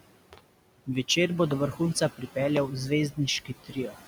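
Noise suppressor artifacts run through the whole clip. The suppressor pulls down any band it judges to be steady background, by about 21 dB, so the room noise, which sits about 12 dB under the speech, drops away in the gaps and returns beneath the talking. On a spectrogram the noise floor looks patchy, with isolated specks flickering between frames.

At 0.33 s comes a loud pop: two sharp clicks in quick succession ending by 0.40 s, peaking well above the speech level, while the sound carries on underneath. This is likely a voltage spike from a plug, switch, static discharge or driver glitch, shaped by the downstream circuitry. The waveform shows a pair of tall, narrow spikes that stand out from the surrounding signal, and the spectrogram shows two thin vertical lines spanning the full frequency range.

From 3.45 to 3.97 s the speech is cut by the noise suppressor. The suppressor mistakes part of the speech for background and turns it down along with the noise, by up to about 15 dB. 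Roughly a third of a second in total is affected, so the parts that are turned down sound swallowed and faint. On the spectrogram those stretches show dimmed energy, and on the waveform the envelope dips sharply.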